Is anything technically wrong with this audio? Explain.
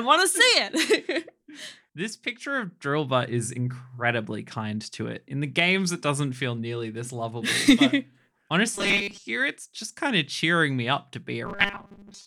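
Yes. Robotic sound from repeated short buffers occurs at 8.75 to 9.23 s and from 11.46 s to the end. The speech turns into a rigid, metallic 200 Hz buzz, likely because audio arrived too seldom and a roughly 5 ms chunk was looped to fill about 70 percent of the time, skipping the real audio.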